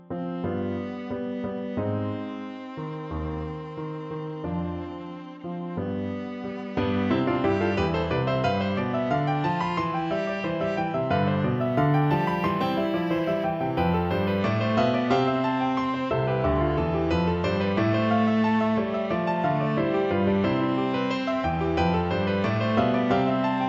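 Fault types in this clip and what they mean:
Imaging from linear upsampling: from 11.57 to 14.40 s, straight-line interpolation from what sounds like a 16 kHz source dulls the top and leaves a faint mirrored band from 8 kHz to 16 kHz, roughly 40 dB down. Unlike aliasing, nothing folds downward.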